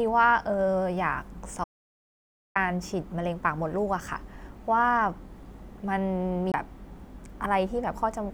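A speech recording where the input was likely lost between 1.64 and 2.56 s, producing an audio dropout to silence: the sound cuts to silence with no room tone, and about 1.1 s of material is gone. At 6.52 to 6.54 s, a CD skip shows the laser jumping to another turn of the disc's spiral, so playback mutes for about 20 ms and resumes from a different point on the disc.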